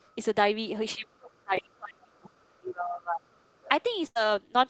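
A faint second voice sits under the opening, from 0.00 to 0.11 s, roughly 40 dB below the main talker, as a short scrap. This is the other side's voice leaking through: the talker's device was likely playing the far end on a loudspeaker, and the echo canceller left a small residue of it in the microphone signal.

From 0.95 to 3.42 s the talker's voice repeatedly sinks, loses presence and drops out in pieces, for about two seconds in total, with the deepest dips around 35 dB down. This is speech suppressed in double talk. Both sides were likely speaking at once, and the echo canceller, unable to tell the local voice from the loudspeaker echo, turned everything down together.

Inside that stretch, at 1.55 to 1.59 s, there is a brief smear, a tiny wobble rather than a clean gap. This is short concealed packet loss. About 20 ms of audio never arrived, and the receiver bridged it by extending the preceding sound for roughly 14 ms before blending back into the real signal.

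At 3.61 to 3.69 s the other side's voice leaking through returns, much more clearly this time, at about 25 dB below the talker. It is again likely residual loudspeaker echo that the canceller failed to remove.

Near the end, from 4.07 to 4.17 s, the sound turns into a fading fill before the talker resumes further along. This is a burst of packet loss: about 80 ms went missing, the receiver stretched the last sound across roughly 84 ms while letting it decay, and the audio picks up again with that section gone. Throughout, the call microphone processing passes nothing above 8 kHz, so the top end is capped there.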